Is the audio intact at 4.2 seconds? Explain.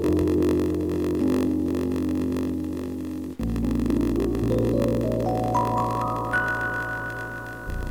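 No. At 4.2 s, as across the whole clip, the sound carries grainy distortion that tracks the signal, with quiet passages turning gritty and the error sitting roughly 35 dB below the signal. The likely cause is low bit depth without dither, with samples truncated to about 7 bits. Unlike dithered requantisation, which leaves a steady hiss, this grit rises and falls with the sound.

A block size mismatch (padded) also runs throughout. Each block read appears to be 1024 samples while fewer are written, so the remainder is zero-filled. That inserts a gap every block, producing a 46.9 Hz buzz and slowing playback to 0.938 of normal speed. The pitch stays put, which separates it from a sample-rate error, where slowing would also lower the pitch.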